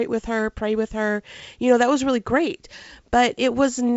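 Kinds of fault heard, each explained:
Nothing stood out on listening to this speech recording.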